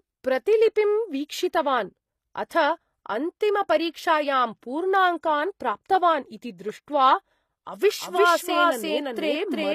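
Throughout, the speech carries plainly audible codec damage: nothing sounds above 14.9 kHz, and the treble above the crossover is gritty and metallic, with s sounds turning lispy. That points to likely HE-AAC compression near 24 kbps, rebuilding the top band by copying lower bands upward rather than simply cutting it off.

At 2.49 s there is pre-echo: an 18 ms wash of hiss arrives just ahead of a sharp attack, which then sounds smeared. The codec spread noise across a whole block, so unlike a click or dropout, it leads the transient.

From 8.02 s to the end, a doubled audio track appears. A full-band copy follows about 400 ms behind at about equal level and starts abruptly. It has no decay or room colour, which sets it apart from reverb or an acoustic echo. A second capture path or a misaligned edit is the likely cause.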